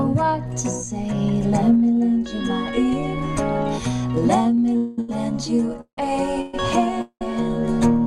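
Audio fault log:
4.43–5.09 s, repeated stalls (stutter): the sound catches four times, with the longest hold about 78 ms. Roughly a fifth of this stretch is filled by continuing the last sound. Nothing is skipped, so it drags. A spectrogram shows repeated, smeared vertical slices.
4.77 s, 5.81 s, 6.41 s, 7.01 s, call audio freeze: the sound hangs as a buzzy continuation for 120–204 ms, then resumes where it stopped. At 5.81 s and 7.01 s it fades to flat silence for about 90 ms and 80 ms. Likely cause: late packets emptying the jitter buffer.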